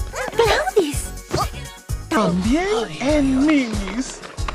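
A playback clock likely set too slow leaves a section at the wrong speed from 2.17 s to the end: sound runs at 0.743 times speed, dropping about five semitones and dragging.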